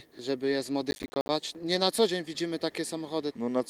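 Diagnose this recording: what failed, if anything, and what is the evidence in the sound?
Call bitrate drop at the codec stage: the encoder fell from 32 to 18 kbps between 0.45 and 1.95 s, so the sound turns coarser and duller for about 1.4 s.

Processor overload crackle in the driver or buffer stage: from 0.91 to 1.29 s around twenty missed deadlines leave short silent gaps, fitting buffers of roughly 10 ms, heard as gritty tearing.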